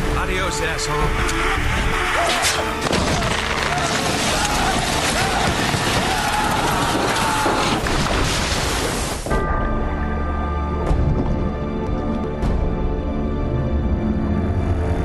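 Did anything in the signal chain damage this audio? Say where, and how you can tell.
Yes: frames out of order at 1.19–1.93 s, 7.87–8.25 s and 11.50–12.24 s, at the network stage. Each stretch plays two neighbouring blocks swapped, 371.5 ms halves (185.8 ms at 7.87 s), heard as a garbled flutter with no lost time.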